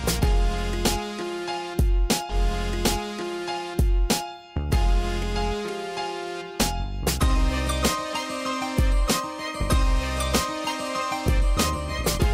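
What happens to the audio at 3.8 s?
At 3.8 s the audio is inside a stream segment repeated fault, running from 2.29 to 4.29 s. The player has queued the same chunk of the stream twice, so a 2-second stretch of programme plays through and then plays again, adding 2 s to the running time. The jump back to the start of the duplicated segment is marked by a short blip, after which the same material is heard a second time.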